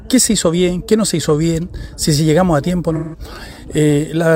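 A smeared, noisy, phasey patch from 2.95 to 3.19 s is AAC frame loss with concealment: the decoder rebuilt missing audio, which fits about four lost frames, from the last good spectrum.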